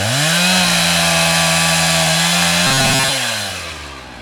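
From 2.67 to 3.19 s the audio likely stopped arriving fast enough, so the playback software kept looping a tiny fragment of about 7.5 ms instead of moving on, skipping most of the real signal in that stretch. This is robotic sound from repeated short buffers. The constant loop length imposes a fixed 133 Hz pitch, turning the sound into a rigid, metallic buzz that only loosely tracks the original contour before normal audio resumes.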